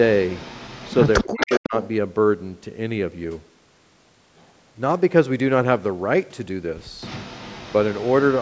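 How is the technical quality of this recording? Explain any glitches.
The recording has two kinds of call-related faults: a delayed echo of the speech in three places, and a short stretch where the speech itself is pushed down.

Echo leak occurs from 0.15 to 1.6 s, briefly from 1.83 to 1.87 s, and again from 7.01 s to the end. The likely cause is a far end on loudspeaker whose echo canceller let part of its microphone pickup return down the line. A copy of the speech trails it by 270 ms. In the first stretch it is fairly strong, roughly 10 dB below the direct sound. In the last stretch it is weaker, and the 1.83 s scrap is faint.

Speech suppressed in double talk affects 1.24 to 1.74 s, overlapping the first echo. With both directions active, the echo canceller likely could not tell the local talker from the returning echo and clamped down on both. The speech drops sharply, by around 40 dB at the deepest point, and breaks up for about four tenths of a second in total. 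The call's microphone path band-limits everything to 8 kHz, and that filtering is ordinary rather than a fault.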